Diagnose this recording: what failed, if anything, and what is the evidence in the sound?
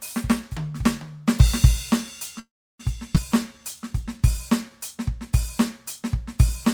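A call audio freeze runs from 2.39 to 2.81 s in this music: the sound trails into a fading tail, then about 320 ms of silence, and resumes where it stopped with nothing lost. The likely cause is network packets being delayed until the jitter buffer ran dry, adding 400 ms of delay.

A skip ahead occurs at 3.15 to 3.18 s. Roughly a tenth of a second of music is missing, and the two sides are butted together almost seamlessly. Either the network dropped that stretch or an overfull jitter buffer discarded it while later audio was already queued.

A jitter buffer slow-down spans 3.34 to 4.71 s. The music plays at about 93% speed with unchanged pitch, sounding slightly stretched. To rebuild its reserve, the receiver repeated short pitch-period segments, adding 106 ms.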